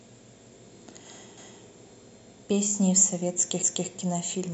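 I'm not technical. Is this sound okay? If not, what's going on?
No. The speech stutters twice, at about 1.38 to 1.63 seconds and again at 3.63 to 3.88 seconds, where a quarter-second of speech plays a second time. This is overlapping chunks: the audio was handled in two-second pieces, and each new piece began a little before the previous one finished, so the join repeats a bit. Unlike a dropout, nothing goes missing; the sound doubles, and it happens at evenly spaced points.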